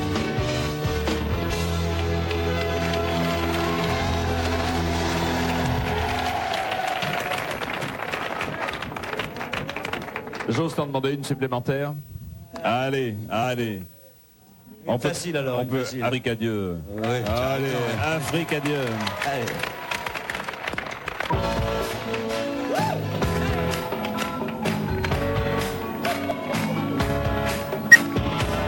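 The audio has compressed frames skipped at 21.30–21.33 s and 27.91–27.95 s, jumping ahead roughly 50 ms and 20 ms. At 26.31 s a single sharp click is heard, likely dropped samples, with under a millisecond lost, so the waveform steps abruptly.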